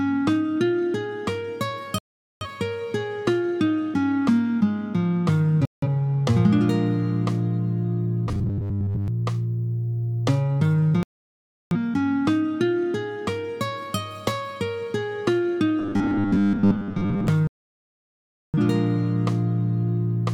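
At 1.98 to 2.46 s the audio mutes abruptly in a digital broadcast dropout. The receiver lost valid frames and silenced its output until good ones returned, so about 0.43 s of programme is gone. A second dropout at 5.65 to 5.87 s removes about 0.17 s. Both gaps fit a whole number of frames of roughly 43 ms each being discarded.

From 8.27 to 9.08 s, and again from 15.79 to 17.28 s, the sound turns into a rigid metallic buzz at 100 Hz. This is robotic sound from repeated short buffers. The likely cause is a 10 ms block being replayed while new data arrived late, so most of the real audio in these stretches is skipped.

Further dropouts silence 11.03 to 11.77 s, losing about 0.68 s, and 17.47 to 18.58 s, losing about 1.07 s, the longest hole in the clip.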